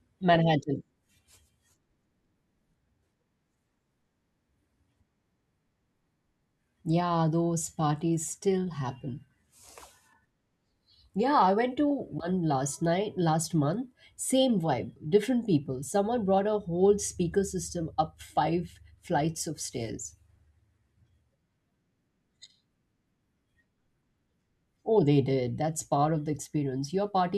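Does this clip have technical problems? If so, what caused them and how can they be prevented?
No, no technical faults here.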